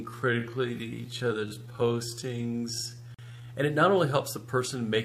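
Time-stretched section, 0 to 3.52 s: the opening plays at roughly 0.61 times its natural pace while the pitch stays put, so the audio sounds drawn out. The likely cause is software lengthening this stretch to fill a set duration, keeping pitch by repeating short slices. At 3.52 s the pace snaps back to normal.

Bluetooth stall, 3.14 to 3.19 s: inside the slowed stretch, the sound drops to silence for about 42 ms, then resumes. The likely cause is wireless interference holding up packets on the way to the headphones, so their playback buffer ran empty and output halted until the delayed packets came through.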